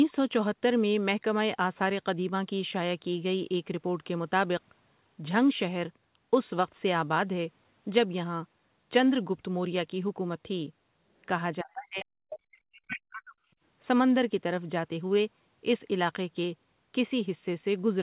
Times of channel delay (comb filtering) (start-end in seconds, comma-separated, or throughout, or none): none